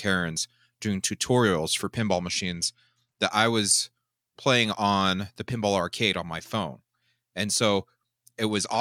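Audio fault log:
1.97–3.30 s and 8.51–8.81 s, Bluetooth SBC bit pool drop: after "doing tutorials for" the treble goes dull and gritty until "I was playing on", then again at the end, which fits the bit pool falling from 31 to 14 (about 99 kbps), starving the upper sub-bands and coarsening the rest. Unlike packet loss, the sound never gaps.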